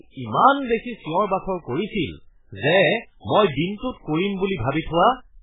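From start to finish, the speech is dull and thin, with nothing above about 3.8 kHz. The s sounds lose their hiss. A watery, swirling texture runs under the whole clip. Consonant attacks smear. The damage is heavy. This points to MP3 compression as the likely cause, at a very low rate that fits roughly 8 kbps. Starved of bits, the encoder cuts the treble and drops weak frequency lines, which flicker on and off between frames.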